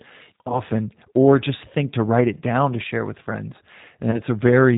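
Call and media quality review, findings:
Rough, slightly synthetic timbre throughout, with nothing audible above 4 kHz. Component: G.729 codec, sound consistent with its 8 kbit/s mode. The decoder rebuilds speech from a vocal-tract filter, a pitch predictor and sparse pulse excitation in 10 ms frames. Fine detail and high-frequency content are lost, giving the plainly audible coarseness.

0.48 to 0.62 s, just before "or just think to": a brief buzzy smear that fades, then a weak, distorted onset. This is VoIP packet loss concealed by the speech codec. About 20 ms of audio is missing, pointing to two lost frames. The decoder extrapolated its last pitch and filter with falling gain, and the error carried forward until around 0.62 s.

4.11 to 4.21 s, right after "to share with friends": the same stretched, decaying tone-like fill. This is packet loss concealment again. About 20 ms of audio is lost, and the recovery frames stay degraded until around 4.21 s.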